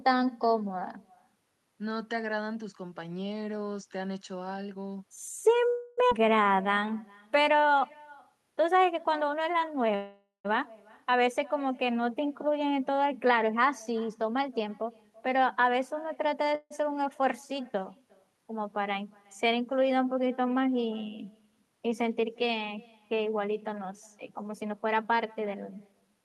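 Throughout the speech, every phrase is trailed by a faint, thin copy around 0.4 s later, at about 27 dB below the talker. This is echo with no canceller: the far end's loudspeaker feeds its microphone, and the round trip returns the voice unremoved.

From 5.69 to 5.99 s the sound stalls into a fading buzz for 280 ms, then resumes exactly where it stopped. This call audio freeze was likely caused by delayed packets draining the jitter buffer, which filled the wait with synthetic continuation.

Right after, at 6.09 to 6.13 s, the speech jumps forward. Roughly 200 ms is gone and the two sides are joined almost seamlessly. This skip ahead dropped audio that was already queued, cutting the built-up delay.

From 6.49 to 8.10 s the talker drags at 90% speed with unchanged pitch, sounds drawn out. This is a jitter buffer slow-down: repeated pitch periods added 169 ms to rebuild a reserve.

At 9.95 to 10.46 s a second freeze holds for 490 ms, the buzz decaying into 140 ms of silence before speech resumes intact. 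The likely cause is again late packets emptying the buffer.

From 14.08 to 16.49 s speech hurries at 107% speed, pitch unchanged. This jitter buffer speed-up trimmed about 150 ms of short pitch-period slices to shed excess delay.

A brief freeze at 16.55 to 16.72 s fills 154 ms, ending in 30 ms of silence, likely from another packet stall.

From 24.30 to 26.24 s the same 107% speed-up returns, again trimming roughly 150 ms.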